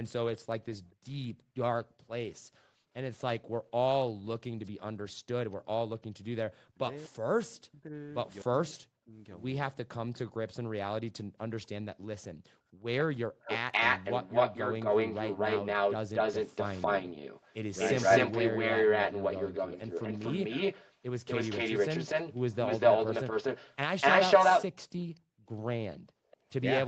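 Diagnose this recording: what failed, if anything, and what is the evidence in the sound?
Echo leak in the call's echo canceller: a copy of the speech delayed 246 ms, likely residual loudspeaker echo, runs faintly (about 30 dB down) from 0.9 to 5.56 s, then about 5 dB above the speech from 10.13 to 26.37 s. It shows as doubled spectrogram harmonics.

Background gated by the echo canceller, also a call-processing stage: the room floor drops about 38 to 40 dB across 0.95–3.64, 11.24–12.84 and 25.2–26.31 s. It appears as abrupt dark gaps in the waveform noise floor.

Speech suppressed in double talk, likely: between 4.06 and 13.5 s, roughly three seconds of speech dip by up to about 40 dB. The waveform shows hollowed-out envelopes and the spectrogram shows missing syllable energy.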